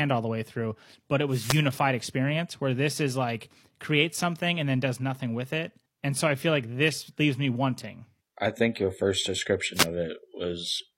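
At 1.29 s, just after "way through but it", a wireless microphone noise hit cuts in and lasts until 1.64 s, before "experience where this is". The radio link from the analogue FM microphone faded as reflected signals cancelled. Receiver noise surged. It sounds like a brief swish of static. A shorter hit follows at 9.74 s, after "I think your first", ending by 9.86 s.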